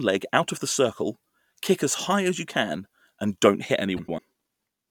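At 3.97 s, just after "can and don't hit", the speech shows frames out of order until 4.19 s. Two adjacent blocks of about 105 ms each were swapped, which fits runs of four frames. The stretch plays back-to-front by halves. It sounds like a garbled flutter.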